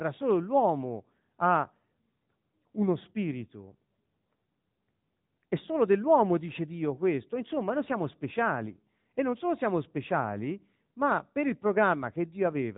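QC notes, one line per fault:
throughout: AMR narrowband mobile codec. Nothing above 3.8 kHz survives, which points to 8 kHz sampling, and the coding damage is plainly audible across the whole speech clip. The speech is rebuilt from a vocal-tract filter driven by a handful of excitation pulses in each 5 ms subframe of a 20 ms frame, not carried as a waveform. The degree of damage fits the AMR-NB 10.2 kbps mode.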